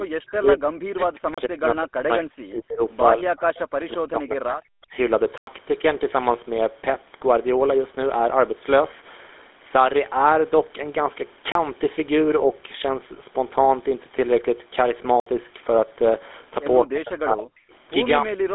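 The whole clip carries the sound of the GSM full-rate codec. The speech has a buzzy, gravelly roughness that is plainly audible. The codec rebuilds the voice from a vocal-tract model and a thinned pulse excitation, and that loses fine detail. The line band runs from about 250 Hz to 3.6 kHz, and nothing comes through above 3.8 kHz. The speech sounds dull and narrow, with the low bass trimmed.

From 0.0 to 2.81 s the speech repeatedly dips and breaks up. At the deepest points it falls by around 40 dB, and about two seconds of this stretch are affected. This is speech suppressed in double talk. The likely cause is an echo canceller that heard both sides at once and turned this talker down along with the echo.

Inside that stretch, at 1.34 s, a block of digital silence cuts in for 32 ms. The sound drops out and returns with no fade. The length fits a 512-sample buffer that was not filled in time.

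Between 3.17 and 4.94 s the double-talk suppression returns. The voice again drops sharply, by up to around 40 dB, and roughly 1.5 seconds are lost or thinned.

More silent blocks follow. The one from 5.38 to 5.47 s lasts 96 ms and is heard as a short hole. At 11.52 s there is a 32 ms gap. From 15.20 to 15.26 s a 64 ms gap opens, which fits a 1024-sample buffer.

Finally, from 16.83 to 17.73 s, the speech is suppressed once more. It drops by up to around 40 dB over about a second.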